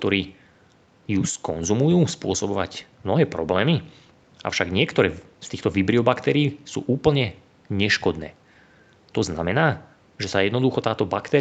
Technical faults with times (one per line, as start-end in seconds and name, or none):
none